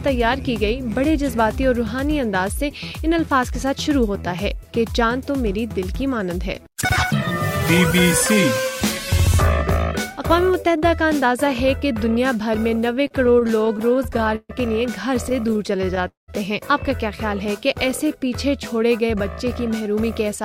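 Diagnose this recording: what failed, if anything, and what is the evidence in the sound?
Repeated stalls (stutter) at the network/jitter buffer: from 12.96 to 14.51 s there are 18 short held repeats, the longest 137 ms, and seven tiny ones from 15.29 to 16.02 s. The waveform shows duplicated fragments.

Call audio freeze from 16.07 to 16.30 s: a brief held buzz fades into about 150 ms of silence, a blank spectrogram column. The likely cause is a delayed packet run emptying the buffer.

Jitter buffer speed-up from 19.02 s to the end: the buffer trimmed around a tenth of a second of pitch periods, so playback runs at 107% speed. Spectrogram harmonics stay level while events crowd closer.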